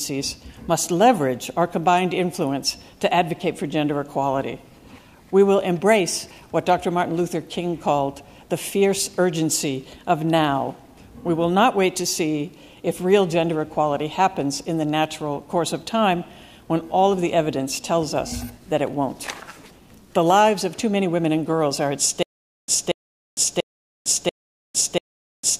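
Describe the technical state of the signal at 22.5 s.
At 22.5 s the signal is in a stutter with silent gaps, running from 22.23 s to the end. A 0.23 s fragment repeats five times every 0.69 s with 0.45 s of digital silence between, likely from a stalled player replaying its last buffer. On a waveform this appears as identical blocks separated by flat lines, and on a spectrogram as identical slices between blank columns.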